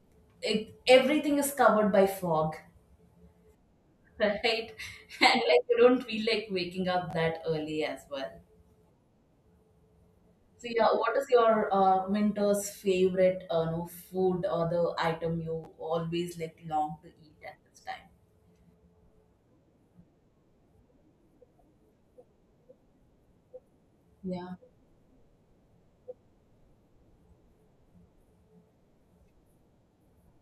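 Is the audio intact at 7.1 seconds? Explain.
No. From 7.11 to 7.13 s the chunks are out of order: an 11.6 ms chunk plays one chunk late, after its successor. It sounds like a brief jumbled blip. The waveform shows three abrupt discontinuities, and the spectrogram shows thin vertical broadband lines.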